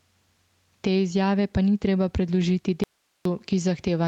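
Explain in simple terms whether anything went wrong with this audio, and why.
Three things went wrong in this speech recording.

Gain pumping runs through the whole clip. The level is pulled down whenever the talker gets loud. The likely cause is a microphone set far too sensitive, with automatic level control pulling it back on each loud sound. Loud and soft moments end up squashed together.

A lost packet rebuilt from error correction comes from about 2.35 to 2.41 s, right after "izjave pa ni treba". For about 40 ms the sound turns rougher and noisier. Two packets were lost. The call had a lower-quality backup copy of each and played it, so there is no silence. That is the difference from a dropout: the sound keeps going, just briefly coarser.

An audio dropout to a faint residue follows from 2.84 to 3.25 s. The speech cuts out abruptly for about 0.42 s, leaving only faint hiss, then cuts back in mid-flow. 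The likely cause is the signal being lost while the rest of the chain stayed switched on. A natural pause or fade would ease in and out. This starts and stops sharply, and the hiss shows the line was still open.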